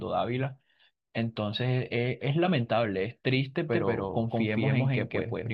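From 3.73 s to the end, the speech picks up a doubled audio track: a second, equally loud copy trails the first by roughly 150 ms, so every syllable gets an abrupt, dry repeat with no room tail. This is likely a second capture path running slower than the main one. On a waveform, each burst is followed by a matching twin; a spectrogram shows identical full-band patterns offset in time, beginning sharply at 3.73 s.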